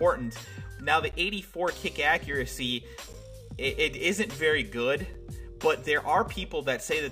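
Short, hard-edged dropouts to silence cut into the sound at 1.12 s, 3.13 s and 5.14 s, lasting about 14, 12 and 7.5 ms. These are gaps between stream segments: the 2-second segments' timestamps leave small holes that playback fills with silence, though nothing is lost.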